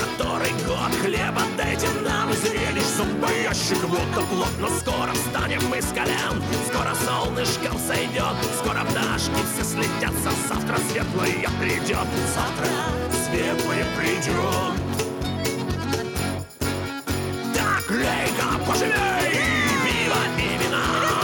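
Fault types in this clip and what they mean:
No technical faults can be heard anywhere in the audio. Nothing in it calls for a fault type or an explanation here.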